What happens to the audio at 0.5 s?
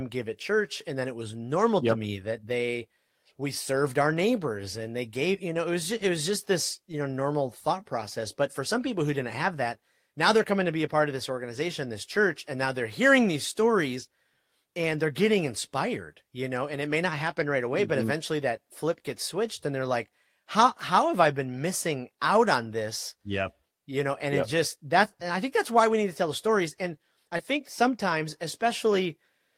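Nothing goes wrong at 0.5 s; the speech plays through that moment intact, with no dropout, click or distortion.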